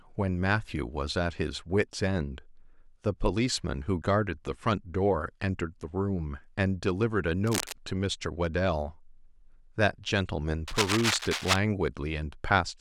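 A speech clip with two bursts of cable scratch noise. The first runs from 7.47 to 7.73 s, a little below the speech level. The second, from 10.68 to 11.56 s, is about as loud as the speech. Both sound like rough, uneven scratching. The likely cause is a worn cable or connector being moved.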